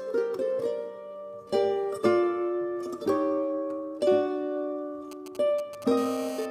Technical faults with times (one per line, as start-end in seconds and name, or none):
5.11-5.84 GSM signalling bursts
5.97-6.46 GSM phone buzz